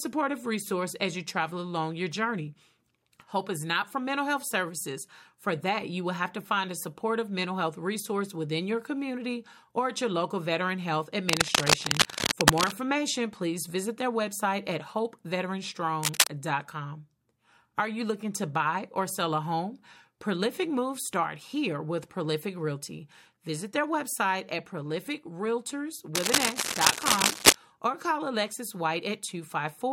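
Cable scratch noise appears three times: from 11.29 to 12.72 s, from 16.00 to 16.27 s, and from 26.15 to 27.55 s. Each burst is a dense, uneven rustling scrape laid over the speech, peaking somewhat louder than the voice itself. The likely cause is a worn cable, connector or control being moved, so its contact resistance jumps erratically and injects ragged noise into the signal until the movement stops.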